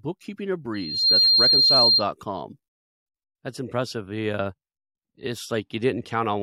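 From 0.74 to 2.05 s there's loudspeaker feedback squeal: a 4.2 kHz tone swells within about a third of a second, the mic-speaker loop running away, ending up around 10 dB above the speech.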